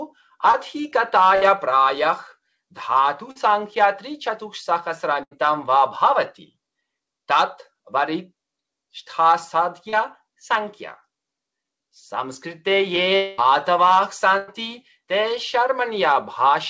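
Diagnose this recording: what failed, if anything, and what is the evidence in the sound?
Short concealed packet loss hit the network stage three times. Packets carrying 20 to 40 ms of audio failed to reach the G.722 decoder in time; that path itself passes nothing above 8 kHz. Each time, the receiver extended the last sound to cover the hole and then blended back into real audio. The result is brief smears or wobbles at 0.52–0.55 s, 3.31–3.37 s and 9.89–9.94 s, where a short transient can disappear.

Bursts of packet loss, also at the network stage, removed longer runs of consecutive audio: 60 ms at 1.35–1.43 s, 80 ms at 5.23–5.33 s and 100 ms at 14.38–14.50 s. The receiver's concealment continued the previous sound and faded it across each gap, so you hear a held buzz or decaying hiss. The sound then resumes further along, with the intervening material simply gone.

A long network dropout starting at 13.16 s most likely reflects a stall in packet delivery rather than isolated losses. 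About 220 ms never arrived, and concealment stretched the last sound through to 13.40 s as a fading buzz or hiss. It never dropped to silence, because the gap was too short for the concealment to give out. Playback then jumps ahead, missing everything that fell inside that stretch.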